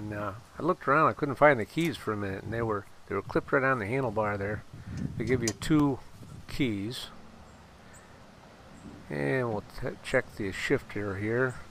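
CD scratch ticks appear from 5.45 to 6.32 s: six brief clicks, the longest lasting only about 2 ms, recurring roughly seven times a second. A disc blemish passing the laser once per revolution defeats error correction, so the player interpolates or mutes those samples.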